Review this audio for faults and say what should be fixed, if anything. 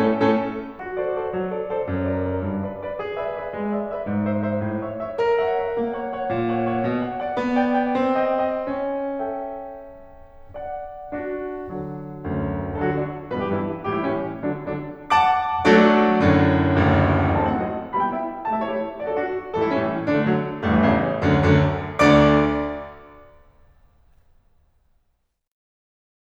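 No faults can be heard in the music, so nothing needs to be fixed.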